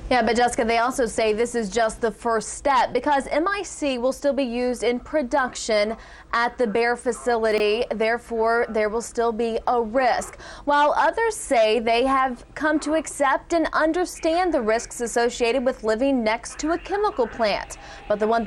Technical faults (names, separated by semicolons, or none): chunks out of order